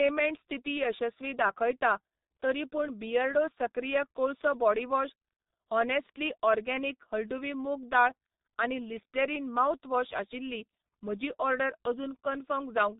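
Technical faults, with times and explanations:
Throughout, G.723.1 codec: the speech is muffled and hoarse with nothing above 3.8 kHz, and consonants blur under heavy low-bitrate coding, consistent with roughly 6 kbit/s.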